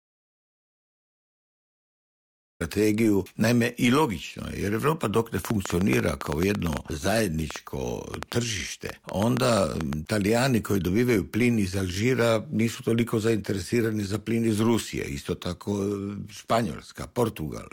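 The input was most likely lost or muted while the recorder kept writing silence, so the audio dropout to silence is already under way and lasts until 2.60 s, with no room tone at all. From 5.45 to 9.94 s, interference or a faulty connection likely injects a train of clicks: around thirty sharp, similar pops at an uneven 6.25 per second, about 15 dB above the signal.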